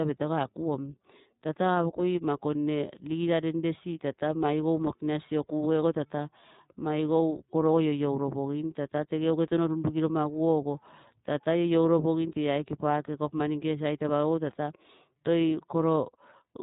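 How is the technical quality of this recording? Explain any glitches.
The recording is technically compromised throughout by iLBC codec damage; there are no isolated glitches. From start to finish the speech is confined to narrowband, with nothing above 4 kHz, so it sounds muffled and telephone-like. iLBC codes each 30 ms block independently, rebuilding the excitation without carrying detail over from the previous block, which fits its 13.33 kbps mode. That leaves a plainly audible rough, slightly synthetic texture on the voice. Unlike a steady low-pass filter, which only dulls the sound, the damage here also makes the speech grainy and buzzy.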